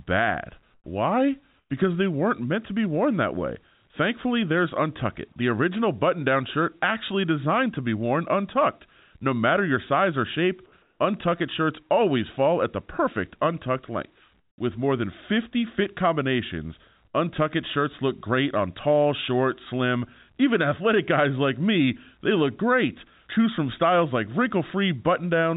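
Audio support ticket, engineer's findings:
Background gaps go flat and featureless at 0.74–0.86 s, 1.58–1.70 s, 10.82–11.00 s and 14.40–14.58 s, dropping about 13, 6, 1 and 15 dB. Comfort noise in place of the background, likely discontinuous transmission filling pauses with synthetic noise. Call path band-limited at 4 kHz.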